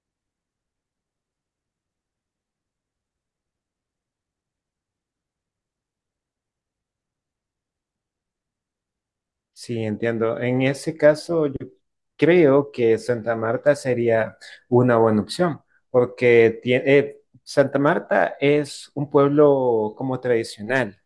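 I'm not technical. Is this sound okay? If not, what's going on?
Yes, the recording holds steady throughout, with no dropouts, glitches or distortion to be heard.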